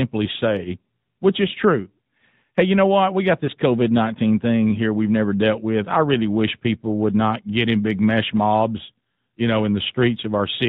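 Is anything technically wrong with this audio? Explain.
Yes. Throughout the clip the speech passed through the AMR narrowband mobile codec. It is sampled at 8 kHz and rebuilt from a vocal-tract model fed by sparse pulses, at a bitrate that sounds like a mid-range mode near 10 kbps. Nothing above 4 kHz survives, and the voice has a plainly audible buzzy, synthetic edge.

From 3.46 to 3.50 s there is a lost AMR speech frame. The damage fits a single 20 ms frame failing its checksum. The decoder fills the gap by repeating the previous pitch and vocal-tract settings at reduced gain, which gives a brief dip or warble before the speech resumes.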